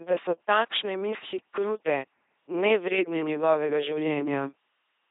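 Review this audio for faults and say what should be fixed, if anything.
The LPC-10 vocoder damage runs through the whole speech clip. Every instant is rebuilt as either a buzzing pulse train or hiss through a short all-pole filter, with nothing above 3.8 kHz, which fits a 2.4 kbit/s encode. Unlike plain band-limiting, this robotic buzz with voiced/unvoiced switching cannot be restored by equalisation. Prevent it by carrying the speech on a waveform codec at a higher bitrate instead of a parametric vocoder.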